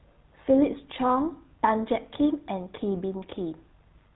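Throughout, the speech sounds plainly buzzy and gravelly with nothing above 4 kHz, the signature of the GSM full-rate codec's coarse, pulse-driven vocal-tract model.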